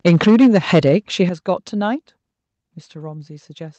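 From 0.06 to 0.95 s the loudest syllables carry a harsh, crackling edge, likely microphone overload: peaks run about 7 dB past the converter's limit and roughly a tenth of samples are flattened. Unlike codec distortion, the grit follows loudness and vanishes on quieter sounds.

The microphone volume is stepped down at 0.28 s by about 3 dB, at 1.29 s by about 8 dB, and at 2.31 s by about 3 dB. Each is likely an automatic input-gain cut, and voice and background drop together instantly rather than fading as a compressor would.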